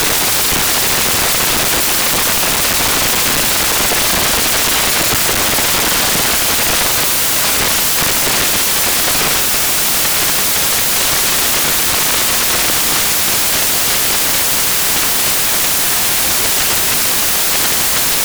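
From start to finish the audio is loud, harsh broadband noise. These are samples built from the wrong bytes: each value was assembled with its bytes misaligned or swapped, so the fast-changing low bits now dominate.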